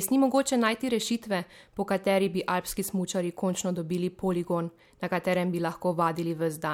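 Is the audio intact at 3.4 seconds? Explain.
Yes, at 3.4 seconds the speech plays through cleanly, with no dropout, click, distortion or other fault to be heard at that moment.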